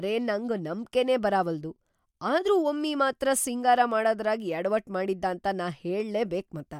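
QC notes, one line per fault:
No faults are heard anywhere in this speech clip. Nothing in it calls for a QC note.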